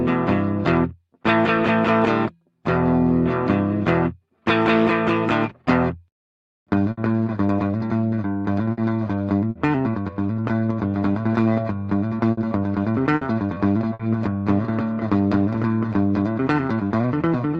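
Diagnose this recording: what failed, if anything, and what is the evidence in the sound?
Network stage, burst of packet loss. At 6.91, 8.71, 9.49, 12.31, 13.15 and 13.93 s, the receiver stretches the last sound and fades it for about 60 ms, then jumps ahead, with 60 ms of audio simply skipped.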